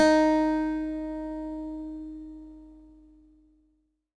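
No technical faults can be heard anywhere in this recording.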